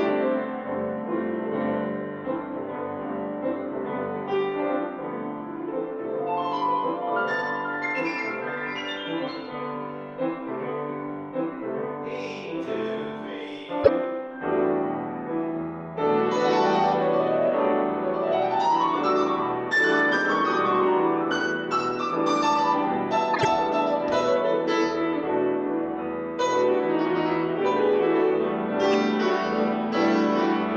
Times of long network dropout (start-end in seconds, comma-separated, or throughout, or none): none